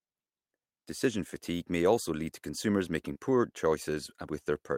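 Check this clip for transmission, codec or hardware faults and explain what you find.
One transmission fault: short concealed packet loss at 3.13 to 3.17 s, just after "lead to consumers making". About 20 ms of the speech never arrived in time, and the receiver patched the gap by extending the preceding sound, so a brief smear or wobble replaces the real audio.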